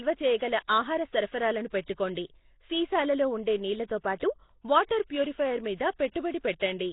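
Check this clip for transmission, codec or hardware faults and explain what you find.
Two faults are audible: heavy codec damage throughout, and pre-echo at two attacks.

The whole clip carries a rough, hissy halo around the speech, with a smeared, underwater quality. Nothing is present above 3.8 kHz. This is likely Nellymoser compression. That codec codes short blocks at a fixed, small bit budget. Weak bands get no bits and are filled with noise, which makes the hiss. The damage is heavy, which fits a rate of about 16 kbps.

Pre-echo occurs at 0.68 s, spreading over 12 ms, and again from 6.12 to 6.15 s, spreading over 37 ms. A block-based codec spreads its coding noise across the entire block. When a sharp attack lands late in that block, noise sized for the loud part leaks into the quiet moment before it. A brief hiss comes just ahead of each attack, and the onset sounds soft and smeared.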